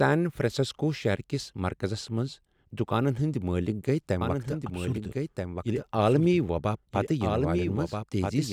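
At 4.21 s a doubled audio track begins and runs to the end: a second copy of the speech enters abruptly about one and a half seconds behind the original, roughly 5 dB quieter and still full-band. Unlike an echo or reverb, the copy repeats only once, with no decay and no room colouring. That points to the likely cause being a second capture through a slower path, or two unsynchronised copies held in an edit.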